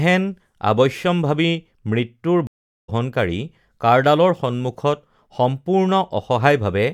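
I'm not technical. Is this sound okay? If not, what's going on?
No. At 2.47 s a stream reconnect occurs: the speech cuts out for about 0.4 s, then resumes roughly half a second further along, skipping content.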